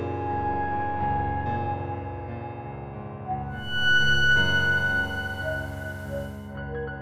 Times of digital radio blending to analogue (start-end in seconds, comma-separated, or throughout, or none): 3.48-6.61